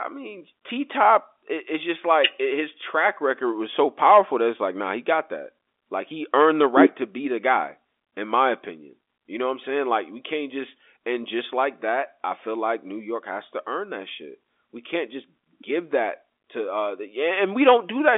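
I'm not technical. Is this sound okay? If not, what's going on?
Yes, there's nothing wrong here; the speech has the narrow, boxy sound of an ordinary landline call, which is normal for a telephone line that carries roughly 300 Hz to 3.6 kHz.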